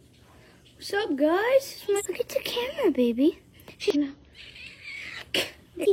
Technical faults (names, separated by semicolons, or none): damaged data in a compressed stream